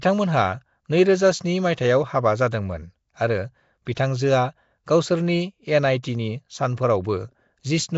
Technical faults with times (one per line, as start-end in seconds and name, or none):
0.00-7.97 Nellymoser compression
3.95 pre-echo